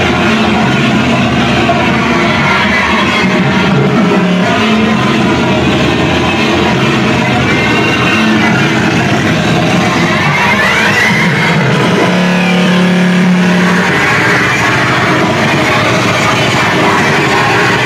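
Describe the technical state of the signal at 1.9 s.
At 1.9 s the signal is intact, with no fault audible at that moment.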